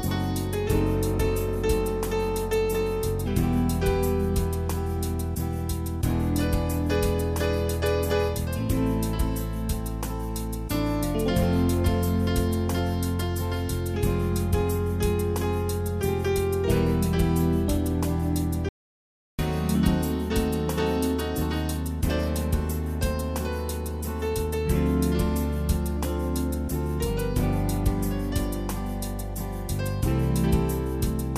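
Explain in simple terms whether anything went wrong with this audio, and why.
At 18.69 seconds the sound stops abruptly and falls into dead, total silence, with no background hiss at all, then resumes at 19.39 seconds. This audio dropout to silence lost about 0.7 seconds, likely because the input briefly disconnected or was muted while recording continued.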